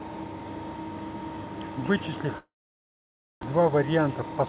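From 2.38 to 3.45 s there's what sounds like a long network dropout, likely a stretch where no packets arrived. The last sound smears into a fading buzz, then about 0.94 s of near silence, and when the speech returns roughly 0.72 s of it is simply gone.

Right after, from 3.53 to 4.46 s, you get a jitter buffer speed-up: the buffer had built up extra delay, so the receiver trimmed short pitch-period chunks, around a tenth of a second in total. Speech runs about 110% speed at unchanged pitch, sounding hurried, all inside a band that stops at 4 kHz.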